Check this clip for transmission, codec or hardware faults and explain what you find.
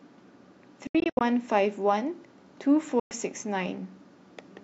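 Two gaps stand out, and both are Bluetooth dropouts. The first runs from 0.87 to 1.21 s. It is broken, with about 205 ms of silence spread over 336 ms and the longest hole near 75 ms. The second is a single 112 ms hole from 3.00 to 3.11 s. The speech cuts out abruptly and returns as if it had kept playing underneath. The likely cause is wireless packets arriving too late at the headphones and being discarded.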